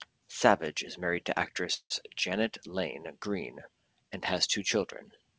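Speech, carried over a call path whose spectrum stops at 8 kHz, with a call audio freeze from 1.74 to 1.92 s. The sound stalls and is continued as a fading buzz that drops to silence for about 70 ms. The likely cause is delayed packets emptying the jitter buffer. Afterwards the speech resumes where it stopped, 163 ms late, with nothing lost. On a spectrogram the last frame smears sideways and thins to a blank band. On the waveform the envelope decays and then flattens.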